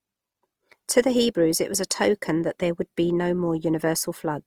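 Opus compression runs from start to finish, with plainly audible damage. The speech keeps its full bandwidth, yet voiced sounds come out rough and grainy, with a noisy texture where detail should be. This points to Opus in its music-oriented mode at a rate around 24 kbps, likely starved of bits so that it refills bands with folded copies of lower ones or with noise instead of the real content.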